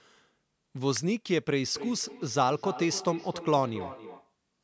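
At 0.97 s a single sharp snap cuts across the speech, an electrical switching spike most likely caused by a nearby switch, motor or static discharge arcing and being picked up on the audio line. It lasts only about a millisecond. On the waveform it is a needle-thin spike standing apart from the speech envelope. On the spectrogram it is a narrow vertical stripe running up to the 8 kHz ceiling the call microphone processing imposes.

From 1.67 s to 4.35 s the speech comes back at itself as a feedback echo between two devices. Two endpoints in the same room are joined to the call, and one plays the other's audio aloud into that microphone. Neither echo canceller removes sound it did not play itself, so every phrase returns roughly 300 ms later, thinner and ringing, peaking about 12 dB below the direct speech. On the spectrogram each syllable pattern reappears as a fainter shifted copy at that regular spacing. 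On the waveform, trailing smaller bursts follow each speech burst.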